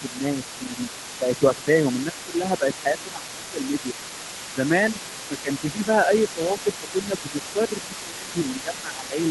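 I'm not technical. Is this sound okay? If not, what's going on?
No, not quite. There's speech suppressed in double talk. The voice dips and loses clarity at 0 to 0.25 s, 0.57 to 0.78 s, 1.19 to 3.95 s, and from 5.28 s to the end. It's likely an echo canceller turning everything down while both sides talked at once.

You'll also hear the other side's voice leaking through, quietly in the background, for the whole clip. The likely cause is that the talker's loudspeaker played the other person, and the echo canceller didn't fully clean that out of the microphone.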